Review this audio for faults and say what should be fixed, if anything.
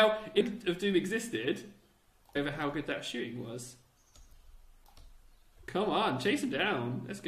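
Damaged data in a compressed stream is heard at 0.40–0.42 s, 2.35 s, 4.18 s and 6.48 s. Each is a brief disruption where corrupted frames in the compressed stream were misread or rejected, and the decoder lost sync and hunted for the next valid frame header. To prevent it, deliver the file over a checksummed or error-corrected transfer and verify its integrity before decoding.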